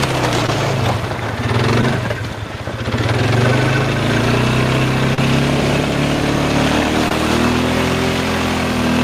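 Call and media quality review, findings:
Short concealed packet loss at 0.46–0.49 s, 1.81–1.83 s, 5.14–5.18 s and 7.08–7.11 s. Brief smear or wobble, roughly 20–40 ms each, longest at 5.14 s. Receiver jitter buffer and decoder concealment extend the preceding sound into late or lost frames, then crossfade back. Unlike a hard dropout, the gap is covered, not silent or clicked. Short transients inside these spans may be lost.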